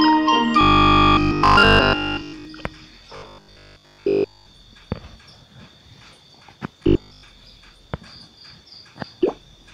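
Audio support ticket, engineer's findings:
Robotic sound from repeated short buffers at 0.61–2.45 s, 3.16–4.46 s and 6.83–7.23 s. Rigid metallic 50 Hz buzz. The first span is replaced entirely, the later two mostly. Likely buffer underrun, with the last 20 ms looped in place of missing audio.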